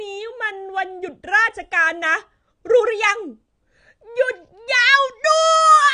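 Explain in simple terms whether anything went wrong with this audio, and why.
Something went wrong for the whole clip, from start to finish. The speech sounds dull and smeared. Nothing is heard above about 9.6 kHz, so the crisp top end of the sound is missing. Hisses and steady sounds take on a warbly, fizzy texture. This points to AAC compression, likely squeezed hard to save space. The encoder throws away detail it guesses you won't notice. Here it removed too much.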